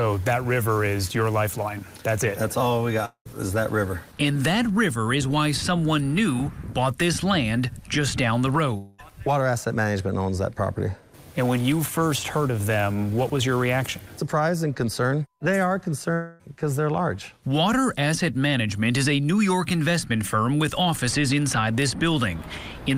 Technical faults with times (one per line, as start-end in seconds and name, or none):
3.05-3.27 long network dropout
8.77-9.00 long network dropout
16.14-16.43 long network dropout